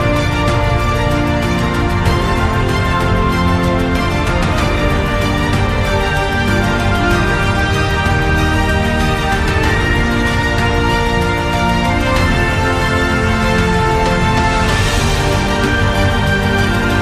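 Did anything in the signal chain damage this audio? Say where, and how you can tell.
No, the signal chain shows no audible damage anywhere.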